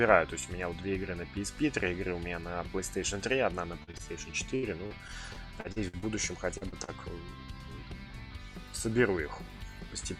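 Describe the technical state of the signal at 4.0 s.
Around 4.0 s the signal is in a short run of network faults. From 3.83 to 3.90 s there is short concealed packet loss: about 40 ms of audio never arrived, and the decoder covered the hole by extending the preceding sound for 39 ms before blending back, leaving a brief smear where that material is gone.

Two short stalls from a late packet follow, at 3.91 to 3.97 s and 3.98 to 4.02 s. In each, the jitter buffer emptied, so the last sound was held for 24 ms and then 18 ms until the data arrived. Nothing is lost, but the sound is stretched with a slight buzz or dip.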